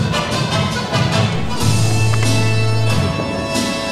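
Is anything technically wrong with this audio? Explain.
Yes. There is a DC step at 1.35 s. The waveform's zero line jumps to an offset of about -21 dBFS, as happens when a converter recalibrates or an input carrying a standing offset is switched in. The offset holds until 2.99 s and then steps back to zero. Each transition is heard as a low thump or click, while the sound itself carries on unchanged through the offset period.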